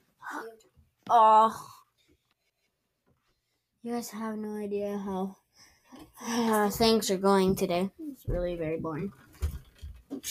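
Between 4.44 and 6.47 s the sound turns hollow and phasey, as if heard through a tube, with a dip starting around 1.5 kHz and further evenly spaced notches above it. This is channel delay (comb filtering): one channel runs a fraction of a millisecond behind the other, and when the two are summed to mono, content common to both cancels at those regularly spaced frequencies, carving fixed notches into the spectrum.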